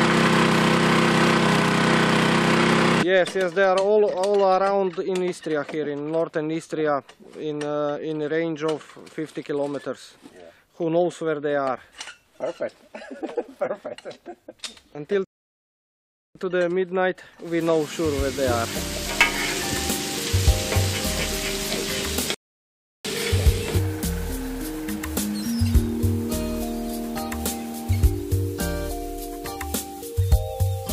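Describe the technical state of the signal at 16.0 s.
At 16.0 s the signal is in a rebuffering stall, silent from 15.24 to 16.35 s. The player's downloaded audio ran out, so it paused for about 1.1 s. Unlike a dropout, nothing is skipped: the sound resumes exactly where it stopped, only later.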